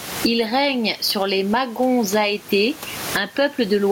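Gain pumping runs through the whole speech clip, a gain swing of around 25 dB, with the room noise sitting about 30 dB below the speech. Likely the input gain is far too high and a fast limiter keeps pulling it down, squashing the speech.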